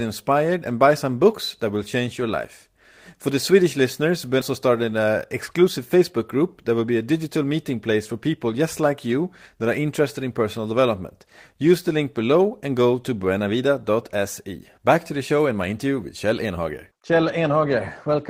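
At 4.41 to 4.43 s there is a skip ahead: roughly a second of speech was dropped while later audio was already queued, so playback jumps forward with no fill. The waveform joins two stretches almost directly, and the spectrogram shows an abrupt change in harmonic pattern at the seam.

From 5.57 to 6.19 s, just before "group that will be", a jitter buffer speed-up trims the built-up delay by repeatedly cutting short pitch-period pieces, about 40 ms in all. Speech runs at 106% speed with unchanged pitch and sounds hurried. The waveform shows whole cycles removed at intervals while the remaining cycles keep their length, and the spectrogram's harmonics keep their spacing.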